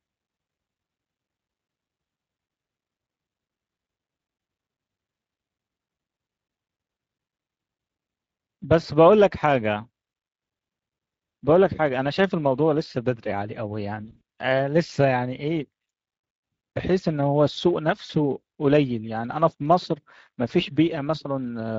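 Speex codec damage runs through the whole speech clip. This CELP coder spends few bits on the excitation, so the voice sounds plainly noisy and hoarse, and the top band is a shaped noise fill. The level of damage fits a bitrate of around 20 kbps.

VoIP packet loss concealed by the speech codec appears from 14.05 to 14.21 s, where about 100 ms of audio drops out in gaps spread over 160 ms, the longest lasting 40 ms. It happens again from 18.05 to 18.10 s, with 40 ms lost. In both places the decoder stretches its last pitch and filter into a fading buzzy tone or coloured noise, and the voice stays weak for a moment after the packets return.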